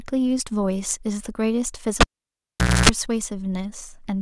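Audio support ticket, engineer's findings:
Pop at 2.01 s, near-silence, then 60 Hz mains buzz (267 ms) and second pop at 2.89 s. Cable pulled and plugged in on live input, about 0.84 s disconnected.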